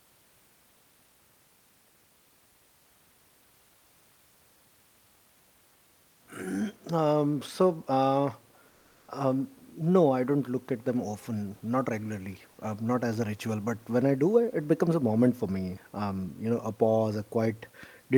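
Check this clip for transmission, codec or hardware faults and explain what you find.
One transmission fault is present. From 8.68 to 9.08 s, the room noise gives way to comfort noise in place of the background. That 400 ms stretch is flat, featureless and about 4 dB quieter. Discontinuous transmission likely paused sending, and the receiver filled the gap with synthetic noise.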